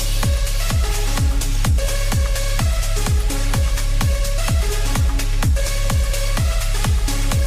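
No technical faults can be heard anywhere in the clip, so there are none to describe in time order.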